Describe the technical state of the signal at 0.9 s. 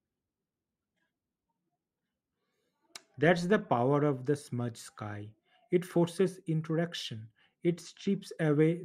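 At 0.9 s the speech signal is intact, with no audible dropout, distortion, clipping or other fault at that point.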